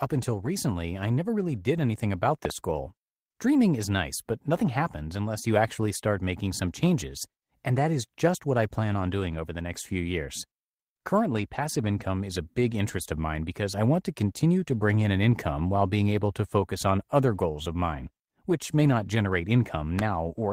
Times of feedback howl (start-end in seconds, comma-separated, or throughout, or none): none